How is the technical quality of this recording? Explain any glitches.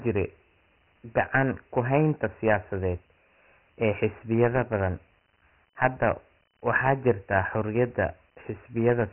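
The quality is poor throughout. Dialogic VOX ADPCM coding affects the whole recording. Nothing survives above about 3.1 kHz, which fits 4-bit samples taken 6,000 times a second. Each sample stores only a coarse step from the last, so the damage is heavy. A gritty hiss rides on the speech and follows its loudness.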